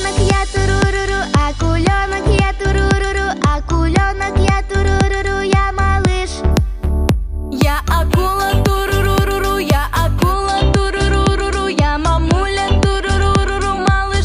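From 6.52 to 10.33 s the audio was upsampled from what sounds like a 22 kHz rate to 44.1 kHz by simply holding each sample, with no smoothing filter. That leaves imaging from sample-and-hold upsampling: a mirrored copy of the spectrum folds up between 11.03 and 22.05 kHz at about 25 dB below the signal. It comes through as a bright metallic fizz that tracks the sound's level.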